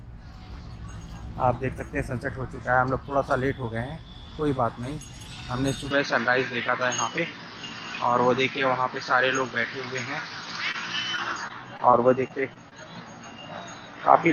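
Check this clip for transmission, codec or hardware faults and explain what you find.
Three faults are present, all from about 5.9 s onward.

From 5.91 s to the end, the sound abruptly turns duller, with nothing above 6.6 kHz, a level shift of a few dB and a faint new noise floor. This is likely an input switched to a poorer device. A spectrogram shows a hard ceiling at 6.6 kHz.

From 10.71 to 10.76 s there is a short stall from a late packet. The last sound is stretched for 26 ms while the buffer refills, heard as a brief hold or buzz. It appears as a repeated waveform cycle.

From 11.16 to 12.73 s, repeated packet loss causes robotic sound. Frequent short gaps, none longer than about 20 ms, are patched by continuing the previous sound, giving choppy texture. A spectrogram shows smeared, striped blocks.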